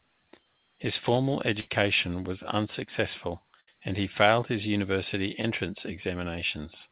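At 1.60 to 1.68 s, just before "was unsuccessful and he", and again at 3.60 to 3.68 s, between "was unsuccessful" and "and he failed his", there is a burst of packet loss. Each time about 70 ms of audio failed to arrive. The receiver stretched the last sound into a fading buzz or hiss, then jumped ahead with that stretch missing.

At 5.42 to 5.44 s, right after "he failed his university", a short concealed packet loss leaves a brief smear. Roughly 10 ms went missing, and the decoder bridged it by extending the preceding sound before blending back in. The call path's narrowband sound, with nothing above 4 kHz, fits G.711.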